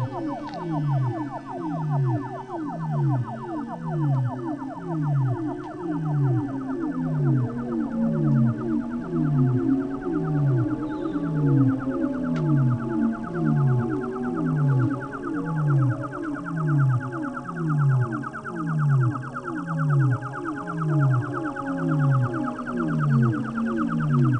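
No technical faults are audible.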